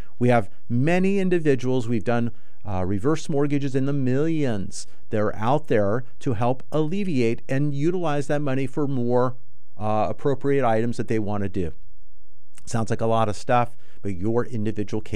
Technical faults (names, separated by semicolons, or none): DC offset